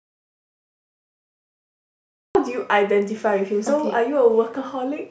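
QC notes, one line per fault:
0.00–2.35 s, audio dropout to silence. The speech clip opens already in digital silence, with no room tone at all, and the speech only arrives at 2.35 s, entering mid-flow rather than from a natural pause. Whatever was spoken before that point is missing. The flat silence suggests the input was likely lost, through a disconnected device, a failed link or a mute, while the recorder kept writing empty samples.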